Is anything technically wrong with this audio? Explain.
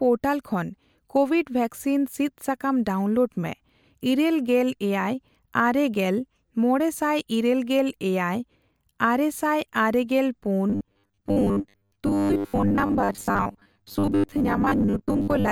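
Yes. Robotic sound from repeated short buffers runs from 10.70 s to 15.51 s. Likely starved buffers loop 10 ms chunks, replacing about half the speech and imposing a rigid 100 Hz metallic buzz.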